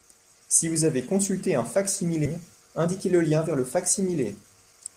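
At 2.25 s the speech skips ahead: around 0.4 s of audio is dropped with no fill, and playback joins the two sides almost directly. The jump is abrupt, with a clipped transition and no pause, and the delay shortens by about the same amount.

From 2.56 s to 4.95 s the jitter buffer speed-up trims short pitch-period pieces repeatedly, removing roughly a fifth of a second in total. Speech runs at about 108% speed with unchanged pitch and sounds hurried.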